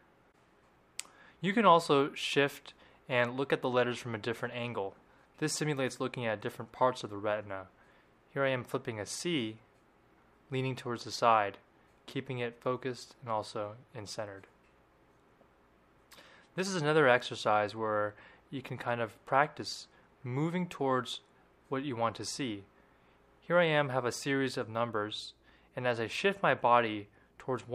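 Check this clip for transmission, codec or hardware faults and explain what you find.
No faults turn up when checking this clip, so there is nothing to explain.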